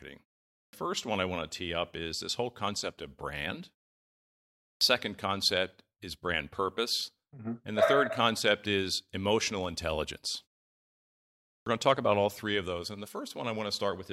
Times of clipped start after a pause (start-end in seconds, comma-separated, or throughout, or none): 0.53-0.73, 4.61-4.81, 11.48-11.66